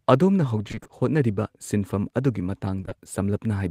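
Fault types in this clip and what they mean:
Repeated packet loss (robotic sound): between 0.67 and 0.91 s, six gaps of up to 20 ms each, 120 ms in all, were filled by extending the preceding sound, so half that stretch is synthetic. It sounds choppy, with pieces missing. A spectrogram shows repeated, smeared harmonic blocks with abrupt edges.
Short concealed packet loss: at 2.81, 2.85 and 2.89 s, 20 ms holes in the speech were patched by continuing the last sound and blending back into the real audio, heard as brief smears or wobbles. The waveform shows short runs of copied periods, and the spectrogram shows briefly frozen, blurred harmonics.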